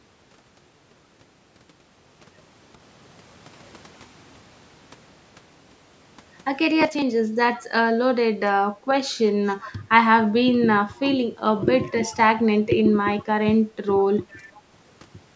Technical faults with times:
7.58-7.62 echo leak
9.62-9.71 echo leak
11.83-11.91 echo leak
14.29-14.59 echo leak

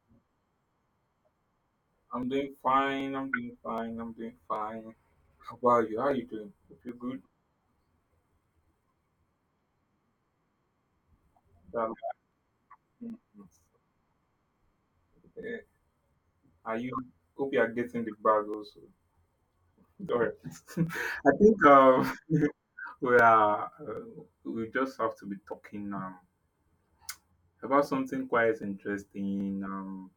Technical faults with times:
0.68-29.40 clock drift buffer slips

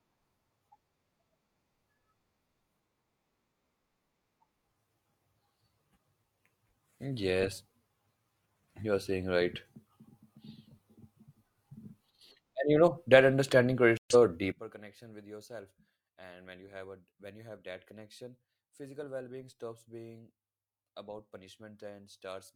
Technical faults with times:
13.97-14.15 corrupt frame muted
14.52-22.55 one channel inverted

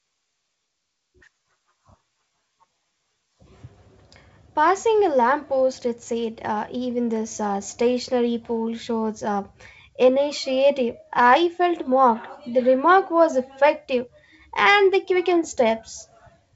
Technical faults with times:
none

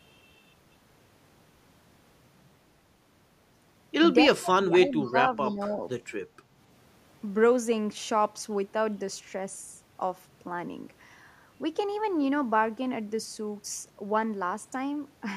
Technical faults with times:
4.37-5.17 speech suppressed in double talk
5.03-5.11 echo leak
5.48-5.80 speech suppressed in double talk

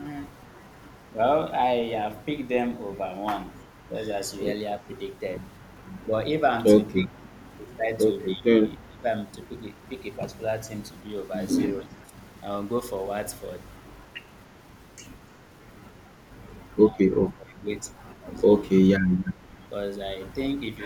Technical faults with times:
4.80-4.89 speech suppressed in double talk
6.94-7.32 speech suppressed in double talk
7.02-7.08 echo leak
8.35-9.05 speech suppressed in double talk
12.03-12.10 speech suppressed in double talk
16.89-17.67 speech suppressed in double talk

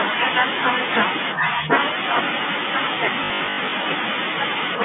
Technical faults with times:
3.24-3.72 packet loss with last packet repeated

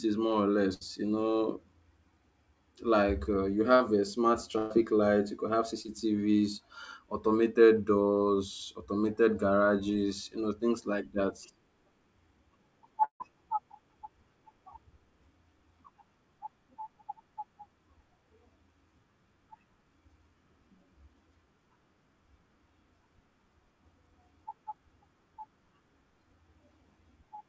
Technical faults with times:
0.74-0.83 burst of packet loss
3.76-3.82 short concealed packet loss
4.58-4.72 burst of packet loss
5.82-5.86 short concealed packet loss
13.04-13.22 long network dropout

